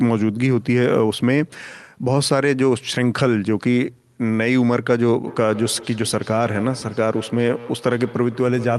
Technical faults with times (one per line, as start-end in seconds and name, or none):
5.27-8.79 feedback echo between two devices